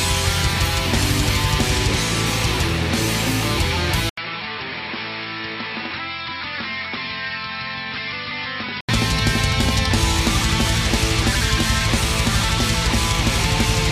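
At 4.09 s the audio drops out for about 80 ms, then comes back duller and boxier, with nothing above 5.5 kHz, roughly 10 dB quieter, and a fresh noise floor sitting around 35 dB under the signal. It stays like that until 8.89 s, when it opens back up. That's most likely the input switched to a poorer device mid-recording, a narrower-band mic or headset path with its own tone and noise, and then switched back.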